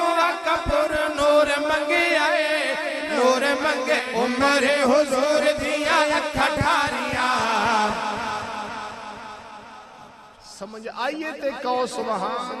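At 3.99 s the audio skips ahead. Roughly a second of material is gone, with no fill in its place, and the two sides of the cut are butted straight together. That points to a late stretch being discarded, likely by the jitter buffer once it overflowed, while newer audio was already queued. The output jumps forward abruptly, and end-to-end delay shrinks by about the same second.

From 4.30 to 5.48 s a jitter buffer speed-up follows. The buffer is still holding more than its target, so the receiver trims it by repeatedly cutting out short segments of one or a few pitch periods. Playback runs at about 103% with pitch unchanged, removing only some 40 ms in total, so it does not yet sound hurried. A stronger pass runs from 8.42 to 10.68 s at about 110%. Around 200 ms is shed there, and the sound is noticeably rushed.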